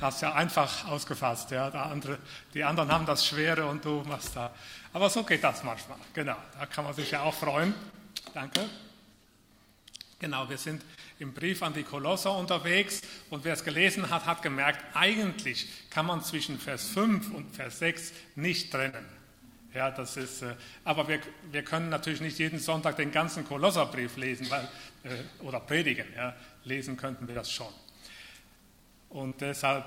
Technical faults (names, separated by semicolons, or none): short concealed packet loss; burst of packet loss